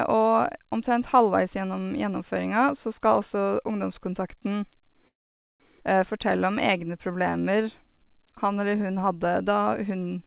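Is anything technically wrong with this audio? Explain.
Yes, there are three faults, all from about 5 s onward in this speech clip. Its narrowband sound, with nothing above 4 kHz, fits a G.711 call codec.

Call audio freeze, 5.08 to 5.62 s. Packets were likely delayed and the jitter buffer ran dry. About half a second of near-silence is inserted, then speech resumes intact.

Skip ahead, 5.80 to 5.82 s. A stretch of audio was dropped while later packets waited. Speech jumps forward abruptly, losing roughly a third of a second.

Jitter buffer slow-down, 6.13 to 9.32 s. The receiver repeated pitch periods to rebuild its reserve. Speech plays at 90% speed, same pitch, drawn out, adding 335 ms.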